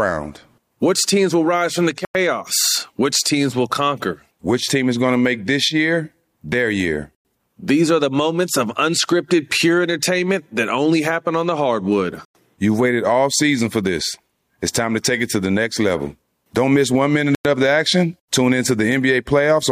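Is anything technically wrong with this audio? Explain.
Yes. The speech drops out into short holes of silence, each 100 ms long, at 2.05, 7.15, 12.25 and 17.35 s: after "will rise from the", again five seconds later, after "happen on the hardwood", and between "miss one minute" and "of the action". This is a gap between chunks: the audio was delivered in 5-second pieces, and silence was inserted at each join, so nothing is lost but the flow breaks regularly.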